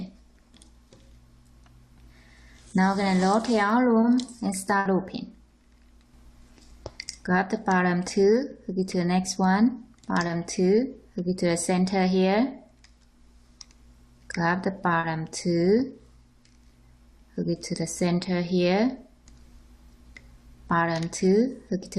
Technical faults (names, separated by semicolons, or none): short concealed packet loss; burst of packet loss